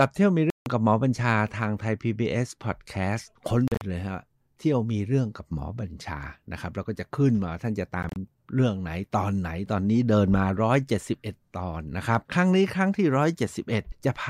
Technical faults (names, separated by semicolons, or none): Bluetooth dropout